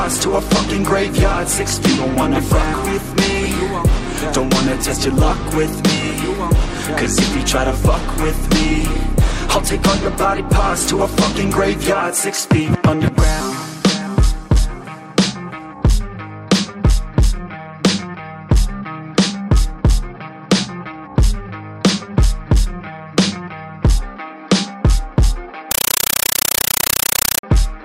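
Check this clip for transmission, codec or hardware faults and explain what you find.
One fault appears near the end. From 25.71 to 27.43 s, a compressed stream is played as audio. The receiving side stops decoding and treats the incoming bitstream as ordinary samples. Each coded frame becomes an 8 ms burst of noise followed by silent zero padding, repeating 31.25 times a second, which fits an AC-3 (Dolby Digital) stream at 384 kbps. The program is completely replaced by very loud, rapidly chattering static for that stretch.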